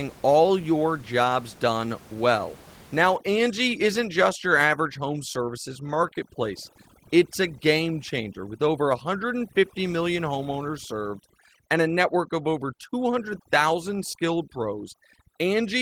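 At 3.16 s, overdone noise removal sets in and lasts to the end of the clip. The noise reduction is working far too hard. It drives narrow frequency bands down or off whenever they sit near its estimate of the room noise, which here lies about 23 dB below the speech. Quiet parts of the speech get caught and cut along with the noise. The background drops and breaks up into twinkling specks.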